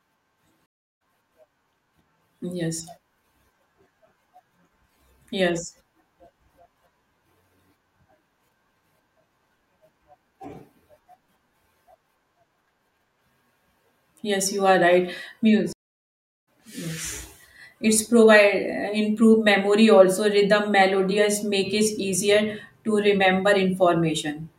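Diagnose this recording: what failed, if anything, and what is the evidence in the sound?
Network stream reconnects at 0.66–1.01 s and 15.73–16.48 s: speech goes silent, then a restarted decoder resumes about 0.3 s and 0.7 s further into the stream.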